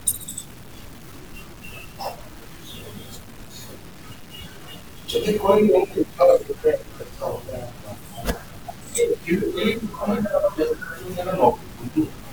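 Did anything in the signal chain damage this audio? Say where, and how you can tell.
Yes. The speech carries low bit depth without dither throughout, and the damage most likely happened at a sample-format conversion stage that truncated the audio to about 7 bits with no dither. The error tracks the signal instead of forming a steady hiss. Quiet syllables and decays turn gritty, and the softest tails sputter or drop to silence. The grainy distortion sits only around 25 dB below the speech and changes character with every sound.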